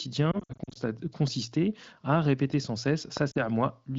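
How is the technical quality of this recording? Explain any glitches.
There are a few real glitches here: two patches of lost AMR speech frames and one loud pop, all on a wideband phone-call signal whose light codec character points to AMR-WB at around 15.85 kbit/s.

From 0.32 to 0.80 s you get the first burst of lost AMR speech frames. About 220 ms of audio goes missing, scattered across roughly 440 ms, and the longest gap is 60 ms. Radio errors corrupted those frames, so the decoder filled each hole by repeating its last good pitch and vocal-tract settings at falling gain. That's why this stretch warbles and dips repeatedly rather than cutting out cleanly. The pattern fits around eleven 20 ms frames.

At 3.17 to 3.19 s, right after "à répéter sans", there's a single loud pop, roughly 10 dB above the speech, and the talking carries on underneath it. It's a sharp click laid on top of the signal, likely from a voltage spike such as a switch, static discharge or driver glitch that the downstream circuitry shaped into a short pulse.

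Then from 3.31 to 3.47 s, still just after "à répéter sans", there's a second, smaller frame loss of about 40 ms. Concealment smears it into a brief warble and a momentary weak or rough return.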